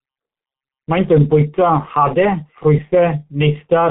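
This speech clip... no, can't start that way.

Speech runs through the G.723.1 codec from start to finish. Nothing is heard above 3.8 kHz, so the sound is muffled. The codec works in 30 ms frames at a low rate, which fits 6.3 kbit/s. Its voice model updates slowly. Consonants blur and the tone turns hoarse. The damage is heavy.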